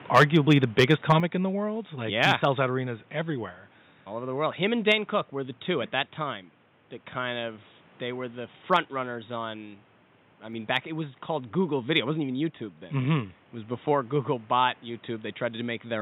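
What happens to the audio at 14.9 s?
At 14.9 s the speech runs on intact, with only the room's own background noise sitting about 31 dB below it.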